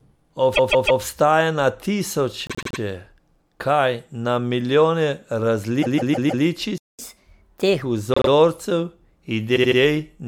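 The speech stutters with repeated frames at 0.54 to 1.01 s, 2.47 to 2.78 s, 5.81 to 6.44 s, 8.14 to 8.30 s and 9.55 to 9.78 s. Blocks of 156.7 ms or 78.4 ms loop two to four extra times, adding 0.16 to 0.63 s. The repeated length, which fits whole compressed frames, identifies it, rather than a glitch of random length.

At 6.78 s the output drops to silence for 208 ms. This playback stall most likely comes from the player running short of data. It then resumes, unlike a dropout, which skips ahead.

From 6.99 to 7.82 s, catch-up at higher speed plays the backlog at 1.25 times normal. Tempo and pitch rise together, about four semitones, which tells it apart from a time-stretch that would keep the pitch.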